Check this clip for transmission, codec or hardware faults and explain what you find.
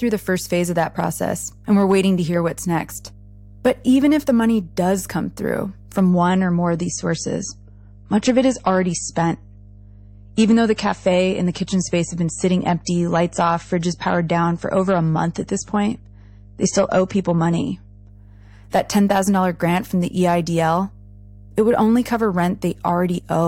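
Two faults are audible: a low hum under the whole recording, and a twelve-second stretch of degraded speech mid-clip.

Mains hum runs through the entire clip as a steady, low drone at 50 Hz, sitting roughly 25 dB below the speech. A 50 Hz tone points to power-line interference, most plausibly a ground loop between connected equipment or a transformer close to the signal path. The interference leaks into the audio as a constant tone that does not follow the speech.

Adaptive stream at a lower bitrate: just after "does come through from", at 6.1 s, the speech abruptly turns dull and watery, with nothing above 8.4 kHz. It stays that way until 18.1 s, then snaps back to full quality. There is no gap at either change. That fits a stream switching down to a low-bitrate MP3 version, around 32 kbit/s against roughly 128 kbit/s elsewhere, when the connection slowed. The encoder discarded the treble and spread quantisation noise through what remained.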